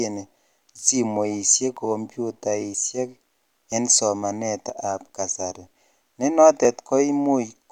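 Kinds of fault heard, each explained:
Audio missing between chunks: the speech skips forward at 0.79, 1.77, 2.74, 3.72, 4.70 (just before "kasari ne") and 6.65 s (just after "kasari ne"), each time losing something like 20 ms. The evenly spaced skips, about one per second, likely come from processing in one-second chunks. Unlike scattered packet-loss dropouts, these land on a steady beat and leave no silent gap, with the two sides of each skip butted straight together.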